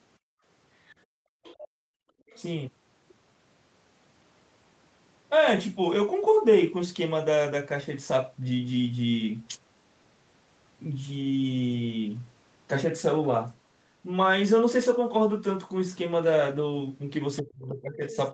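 From 0.19 to 0.44 s, the background is gated by the echo canceller. The room sound drops by about 38 dB while the loudspeaker plays, then returns.

At 0.87 to 0.95 s, a faint second voice appears, roughly 30 dB below the speech. This is likely the other side's voice leaking through past the canceller.

From 1.06 to 2.28 s, the gating returns, for about a second in total. The background sinks by up to about 36 dB.

The faint voice comes back at 1.43 to 1.68 s, louder, around 20 dB down. It is heard again at 2.28 to 2.42 s and at 17.37 to 17.42 s.

From 17.42 s to the end, the talker's speech dips by up to about 30 dB while the other side talks. This is likely speech suppressed in double talk: the canceller could not tell the talker from the echo, and turned both down.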